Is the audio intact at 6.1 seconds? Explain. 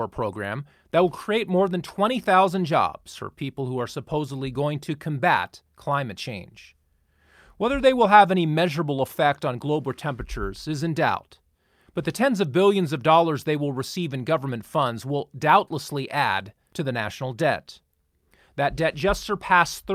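Yes, the speech at 6.1 s is intact, with no dropout, click, distortion or other fault at that moment.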